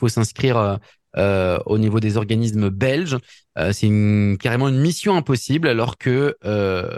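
Speech recording, and nothing is technically wrong with it.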